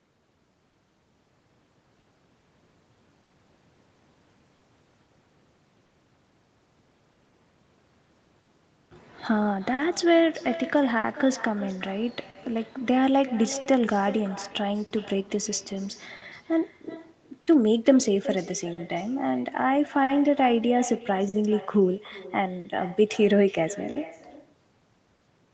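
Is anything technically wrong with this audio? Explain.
Yes. The speech carries three faults.

Echo with no canceller runs throughout. The far end played the call on a loudspeaker and its microphone fed it back unremoved. Every phrase returns around 0.4 s later, about 17 dB quieter and thinner.

Clock drift between sender and receiver also runs throughout. The sender's clock is slow by a few percent. The jitter buffer keeps draining, so the receiver repeats short pieces or briefly runs dry. Small timing hiccups recur at uneven intervals.

Scattered short gaps appear from 0.69 s to 25.24 s. There are about twenty lost or late packets, none much longer than 50 ms. The receiver covered each hole by extending the last sound, leaving brief ticks and smears. The top end stops near 8 kHz, consistent with a wideband call codec.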